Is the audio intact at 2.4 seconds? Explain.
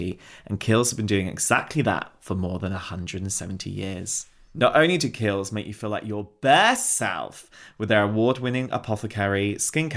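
Yes, the speech at 2.4 seconds is intact, with no audible fault at that moment.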